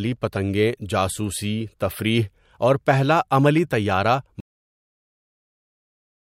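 It's a speech clip with a cut-off end: right after "اور پہلا عملی طَیارَہ" the audio just stops at about 4.40 s, mid-sound, and drops straight to digital silence with no decay or room tail at all. That dead silence runs to the end of the file. What's happened is the final buffers never got written out or played, so the recording was truncated rather than allowed to finish naturally.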